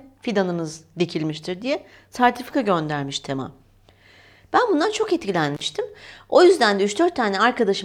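At 5.55 s the speech cuts out for about 47 ms, ending at 5.61 s: an intermittent contact, where a loose plug or cable briefly opens the line. Crackle marks both edges and faint hiss fills the gap, unlike a digital dropout's clean, silent break.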